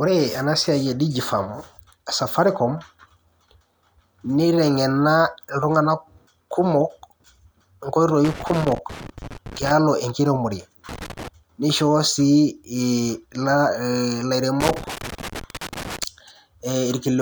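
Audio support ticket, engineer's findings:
Loose connector crackle in speech, 8.25–9.71 s, 10.89–11.28 s, 14.60–16.04 s. Worn or dirty contact making and breaking, chopping signal, DC adding pops. Irregular scratchy bursts, not evenly spaced clicks as from buffer underruns. Reseat or replace cable/jack.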